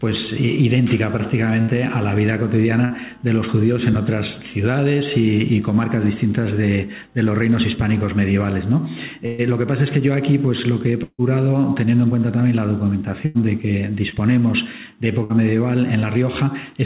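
Burst of packet loss at 1.61–1.71 s, 2.85–2.93 s and 9.26–9.41 s: consecutive packets went missing, and the receiver stretched the last sound into a fading buzz or hiss. The 9.26 s gap is longest, with about 120 ms lost.

Long network dropout at 11.03–11.22 s: about 150 ms of audio never arrived. A fading continuation fills most of it, then roughly 40 ms of silence follows before the sound resumes further on. The likely cause is a network stall.

Further bursts of packet loss occur at 13.26–13.37 s and 15.23–15.33 s, each heard as a held, decaying smear.

Short concealed packet loss at 14.09 s: about 30 ms was patched by extending the preceding sound, leaving a brief wobble. Throughout, the call path's band limit leaves nothing above 4 kHz, which fits a G.711 telephone codec.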